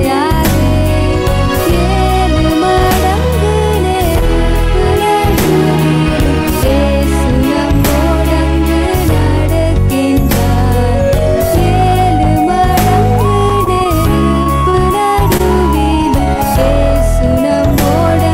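From 13.49 to 13.87 s, packets kept going missing: four gaps, the longest 27 ms, were patched by extending the preceding sound, 58 ms in all, with 20 ms lost outright. This repeated packet loss leaves the stretch choppy, with pieces missing.

At 14.43 to 14.48 s a late packet emptied the jitter buffer, adding 29 ms of delay. The receiver held the last sound for 29 ms, then resumed where it stopped. This short stall from a late packet drops nothing, only briefly drawing the sound out with a slight buzz.

Two short concealed packet losses follow, at 14.70 to 14.75 s and 15.37 to 15.41 s. Each time about 20 ms never arrived and was bridged by continuing the prior sound, for 31 ms and 18 ms, leaving a quick smear or wobble where audio vanished.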